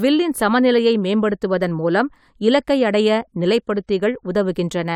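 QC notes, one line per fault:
No faults found in this speech clip.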